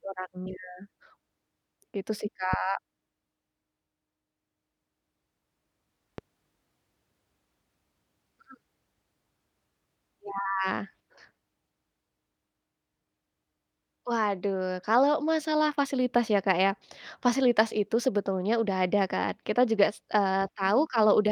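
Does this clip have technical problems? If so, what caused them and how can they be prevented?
Yes. A loud pop hits at 2.53–2.56 s, well above the speech, and a weaker one at 6.18–6.21 s. Each is likely a voltage pulse from a plug, switch or static. Unlike a dropout, the speech continues beneath it. Seat connectors firmly and discharge static beforehand.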